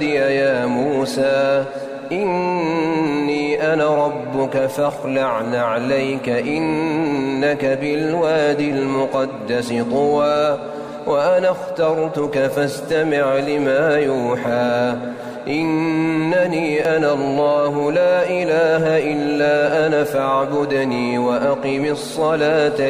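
The audio skips twice, at 4.90 s and 16.85 s. At each point about 30 ms of sound is gone, and the two sides are joined directly with no silence between them. The cause is likely audio missing between chunks. The recorder or processor would handle the sound in blocks and drop a short piece at each handover. The two skips sit about 12 s apart, which fits two 6-second chunks.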